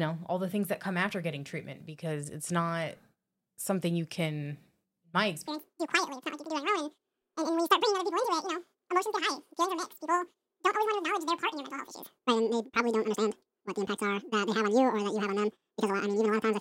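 From 5.48 s to the end, the audio is read two samples at a time (double speed). The reader treats each pair of samples as one frame, as if it expected two channels or wider samples. The speech runs twice as fast and an octave higher.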